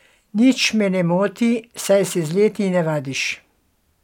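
Nothing here calls for comment, since the speech comes through without any audible fault at any point in the recording.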